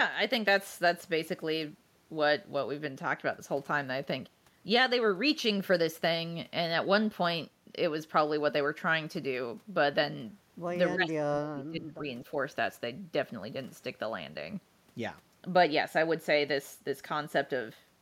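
From 10.94 to 12.03 s the talker's level sinks hard, bottoming out around 25 dB down, with roughly a second of speech affected in all. That's speech suppressed in double talk. The likely cause is both ends talking at once. The echo canceller couldn't tell this talker apart from the loudspeaker echo it was trying to remove, so it clamped down on everything, and the near-end speech got pulled under along with the echo.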